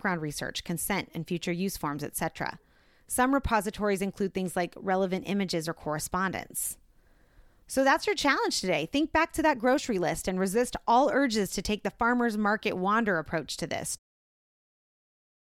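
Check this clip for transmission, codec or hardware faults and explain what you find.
I found no transmission, codec or hardware faults in this clip; the level fading out smoothly at the end is ordinary editing.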